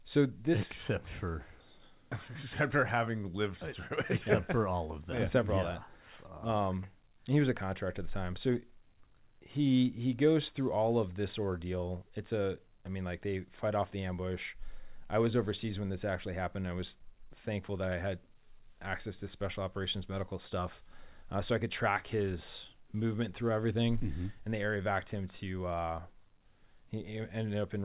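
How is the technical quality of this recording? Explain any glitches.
Nothing here counts as a glitch: the speech comes through a call path whose band stops at 4 kHz, which fits a 64 kbps G.711 A-law codec, and there's no fault to point to anywhere in it.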